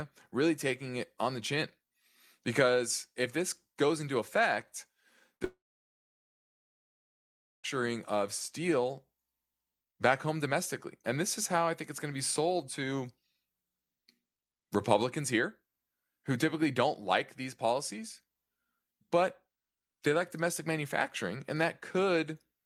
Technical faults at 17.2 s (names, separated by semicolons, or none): none